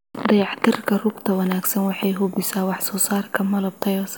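No technical faults can be heard anywhere in the recording, and the speech signal stays continuous and intact throughout.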